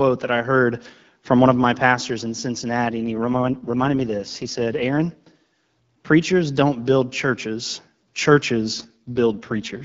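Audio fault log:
2.90–4.86 s and 8.73–9.84 s: AMR rate drop. Just after "of my pastors in", the speech turns rougher and more synthetic, with no gap and no loss of band. This fits the wideband codec stepping from 12.65 to 6.6 kbit/s to spend bits on error protection.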